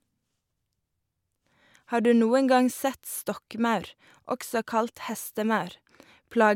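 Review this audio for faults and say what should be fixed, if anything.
Nothing in this audio needs to be fixed, as it has no faults.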